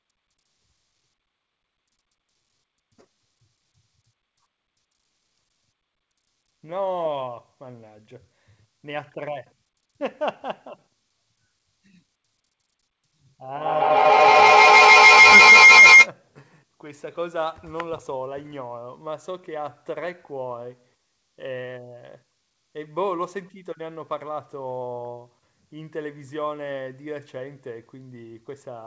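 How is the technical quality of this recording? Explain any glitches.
The recording has one clear glitch, a feedback howl, and the audio carries nothing above 8 kHz, which fits a wideband call codec such as G.722.

From 13.53 to 16.12 s a shrill tone around 2 kHz swells, its repeats coming roughly every 150 ms, and it peaks about 20 dB above the speech. This feedback howl occurs when a microphone and a loudspeaker on the same call loop sound back with rising gain.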